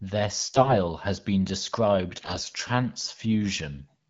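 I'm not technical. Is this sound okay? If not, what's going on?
No. AMR bit errors: on a weak phone link, parts of the coded speech arrived corrupted, making the voice briefly hoarse and gargly from 0.52 to 0.76 s, and worse from 2.16 to 2.52 s.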